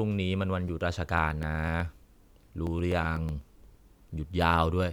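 Speech with a regular ticking running through it from about 0.68 s to 3.91 s, one tick roughly every 124 ms, so around thirty in all. That's the signature of periodic USB or driver dropouts: something is stalling the USB bus or audio driver on a fixed cycle, and each time around a millisecond of audio just gets skipped rather than padded with silence. The jump in the waveform is what clicks, and it only shows up where there's sound underneath it.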